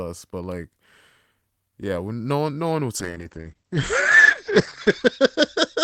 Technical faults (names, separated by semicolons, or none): call bitrate drop